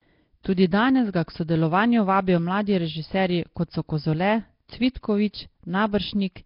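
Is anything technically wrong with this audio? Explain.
Yes. Throughout the speech there is heavy damage: a rough, hissy haze, a smeared underwater quality, and nothing above 5.3 kHz. This is likely Nellymoser compression, which fits a rate near 22 kbps. Its tight fixed bit budget leaves weak bands empty, and the decoder fills them with noise.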